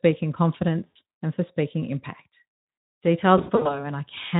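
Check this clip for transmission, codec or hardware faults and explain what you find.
Two bursts of VoIP packet loss concealed by the speech codec. At 0.88 to 0.96 s, just before "and for speaking impact", about 80 ms drops out and the decoder extrapolates into a fading smear. From 3.37 to 3.84 s, 160 ms is lost in runs up to 60 ms, leaving repeated weak, distorted patches. Underneath, the speech carries light Speex coding at 15 kbps.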